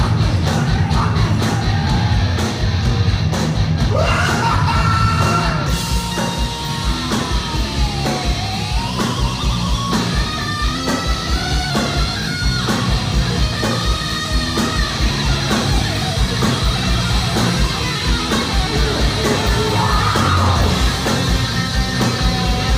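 From 10.75 to 11.70 s there is a drift correction step, likely from clock-matching software abruptly raising the playback rate by about 5.5% to rebalance its buffer. Speed and pitch rise together by roughly 92 cents, nearly a semitone, before snapping back.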